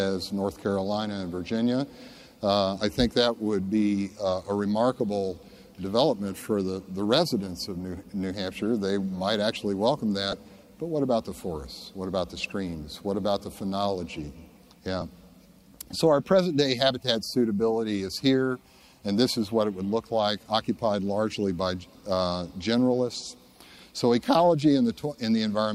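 At 10.32 s and 15.01 s, lost LE Audio frames leave brief gaps of about 10 ms, consistent with a single dropped LC3 frame. The decoder fills each gap with the previous spectrum under random signs, producing a short noisy smear. On a spectrogram this shows as a thin vertical blur of noise.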